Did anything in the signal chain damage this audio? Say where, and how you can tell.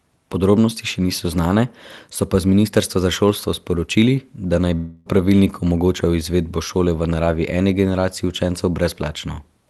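Yes. From 4.75 to 5.08 s the sound turns into a buzzy, fading continuation and then resumes with about 0.3 s missing. This is likely a long network dropout, with concealment filling the gap without falling to silence. A spectrogram shows smeared, repeating bands decaying; the waveform shows a shrinking periodic envelope.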